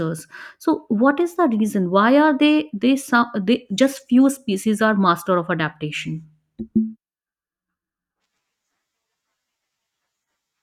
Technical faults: none

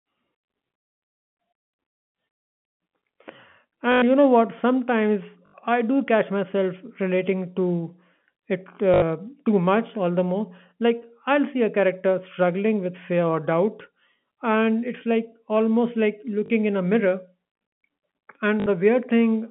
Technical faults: packet loss with last packet repeated

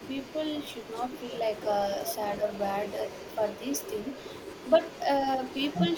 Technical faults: echo leak; speech suppressed in double talk

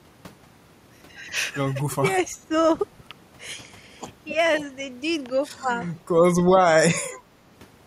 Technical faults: speech suppressed in double talk

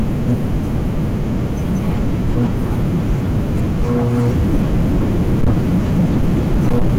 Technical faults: hard clipping

